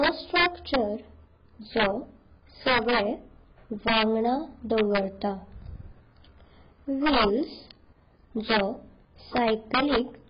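Throughout the clip, the speech was likely passed through AAC compression at a very low bitrate, something like 12 kbps. The encoder removes everything above 5.2 kHz and quantises the remaining bands coarsely, so the voice sounds dull and smeared, with a warbling, fizzy texture on sibilants.

Integer overflow occurs at 0.03 to 0.76 s, 1.77 to 1.86 s, 2.68 to 3.00 s, 3.88 to 4.03 s, 4.78 to 4.98 s, 7.06 to 7.25 s, 8.50 to 8.60 s and 9.37 to 9.98 s. In each of these spans the signal is driven about 2 to 5 dB past the largest integer the system can hold. Instead of being limited, those samples wrap around to the opposite sign and swing across the full range. The result is violent cracks on the loud passages, much harsher than ordinary clipping.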